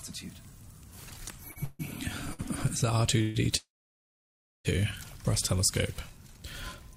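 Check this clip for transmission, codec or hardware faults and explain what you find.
Yes, there are transmission faults. Two short stalls from late packets and three call audio freezes interrupt the sound. No audio is lost in any of them, but each one pushes the rest of the clip later.

The short stalls from a late packet occur at 1.51–1.58 s and 2.33–2.41 s. A packet arrived late and the playout buffer ran dry. The last sound is held for 45 ms and then 55 ms, with a slight buzz or dip before the audio resumes where it left off.

The call audio freezes occur at 1.64–1.81 s, 3.22–3.36 s and 3.56–4.67 s. The first two add 154 ms and 129 ms of continuation as a fading buzz or hiss. The third runs about 1.1 s, and roughly 990 ms of it is silence. The likely cause is packets held up in transit, which empties the buffer until they arrive.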